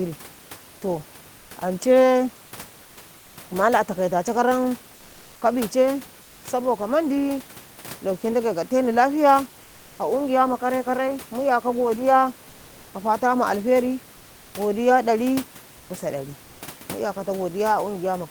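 The sender most likely paused transmission during silences, as Opus DTX does, so the receiver substituted generated noise, comfort noise in place of the background. At 2.83–2.97, 3.19–3.37, 12.49–12.93, 15.77–15.89 and 16.43–16.61 s, the real room noise, sitting about 30 dB below the loudest sound, gives way to a flat, featureless hiss within about 1 to 2 dB of the original level, before the natural background returns when sound resumes.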